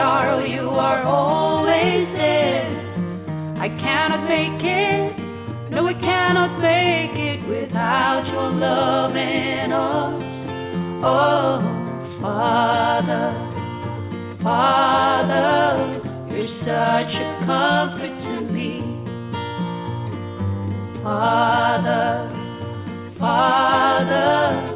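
No technical faults occur at any point, and the call path carries the sound with nothing above 4 kHz, which fits a narrowband G.711-type codec.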